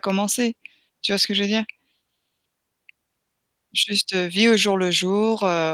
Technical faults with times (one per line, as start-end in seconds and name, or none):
none